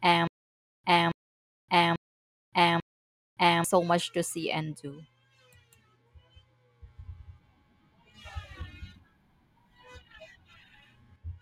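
Stutter with silent gaps until 3.64 s: identical 0.27 s bursts every 0.84 s, flat-line, blank spectrogram columns between them, likely a stalled stream looping.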